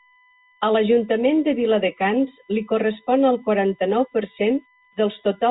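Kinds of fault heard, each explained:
USB whine: A steady, fixed-pitch tone at 1 kHz runs under the speech throughout, with its strongest component at the 2 kHz harmonic, roughly 35 dB below the speech. It comes from a USB device drawing current in regular 1 ms frames. That pulsing leaks into the audio through shared power or ground, so the whine holds its pitch regardless of the talker. It sits well inside the narrow telephone band, which cuts off near 3.8 kHz.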